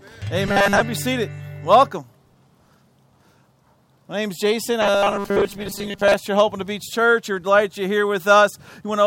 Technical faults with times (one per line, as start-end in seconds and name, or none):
0.47-0.80 robotic sound from repeated short buffers
4.82-6.14 robotic sound from repeated short buffers